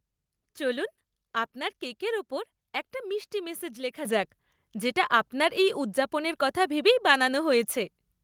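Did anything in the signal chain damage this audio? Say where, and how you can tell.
Yes. At the call-processing stage, the microphone volume was stepped up at 4.05 s, between "একটা মিষ্টি মেসেজ লেখা" and "যাক যেটা আপনার এই". Speech and background noise jump by about 7 dB together and stay there. Software raising the device input gain in one step does this, unlike a gradual compressor ramp.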